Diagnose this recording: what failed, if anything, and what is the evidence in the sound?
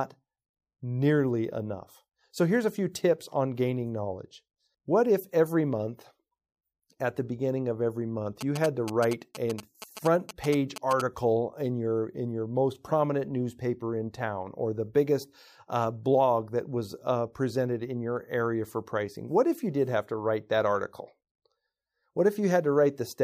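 GSM signalling bursts enter at the analogue wiring stage from 8.41 to 11.02 s: a galloping dit-dit-dit of short 217 Hz buzzes, roughly 10 dB below the speech. The audio circuit rectifies a nearby 2G phone's radio bursts. Unlike steady mains hum, this buzz arrives in gated clusters.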